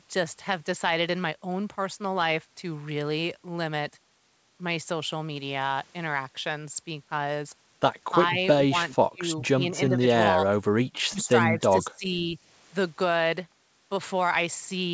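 Speech suppressed in double talk hits at 9.0–9.36, 9.54–10.06, 11.09–11.31, 11.51–11.61 and 11.81–12.38 s. The speech dips in choppy pieces, by up to about 30 dB, likely because the echo canceller could not separate this side's speech from the overlapping far-end echo.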